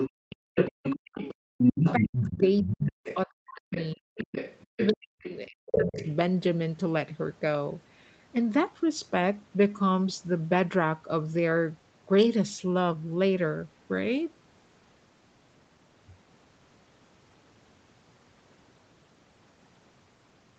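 A second voice runs under this speech recording from 0.00 to 3.16 s at roughly the same level as the main talker, and returns more faintly from 3.71 to 5.36 s and from 5.71 to 6.12 s. This is the other side's voice leaking through, likely because the echo canceller failed to remove the loudspeaker's playback from the microphone. Between 0.10 and 0.39 s the room sound drops out for about a fifth of a second, as deep as about 40 dB: the background is being gated by the echo canceller, which clamps the microphone down while the loudspeaker plays. The talker's own voice also sinks steeply from 0.67 to 1.20 s, 1.65 to 4.09 s and 4.69 to 5.97 s. This is speech suppressed in double talk, likely because the canceller could not separate the talker from the overlapping echo and turned both down.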